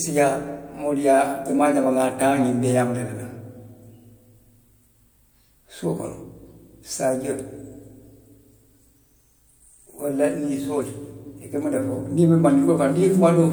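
Speech clip with no faults.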